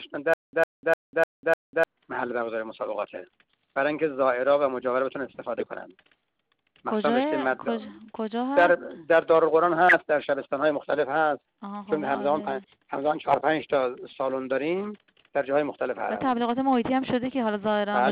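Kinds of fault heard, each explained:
Stutter with silent gaps: from 0.34 s to 1.84 s, the same short burst of about 104 ms comes back five times, each followed by roughly 196 ms of dead digital silence, so it ticks along on a steady 300 ms cycle. That's most likely the player or stream stalling, replaying its last fragment on each retry and then running dry. Whatever should have played in that stretch is simply gone.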